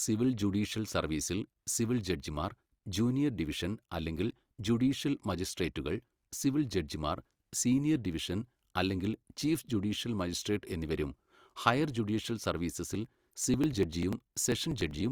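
Periodic USB or driver dropouts run from 12.85 to 15.01 s: something blocks the audio path about every 0.098 s, skipping roughly 2 ms of speech each time, around twenty losses in all. They are heard as a steady train of ticks riding on the speech.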